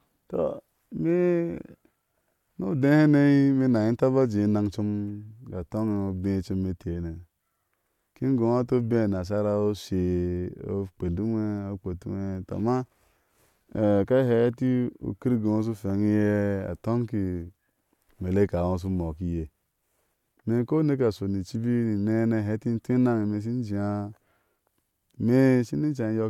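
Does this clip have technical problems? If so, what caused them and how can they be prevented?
No, the speech signal shows no technical problems, so there is nothing here that needs preventing.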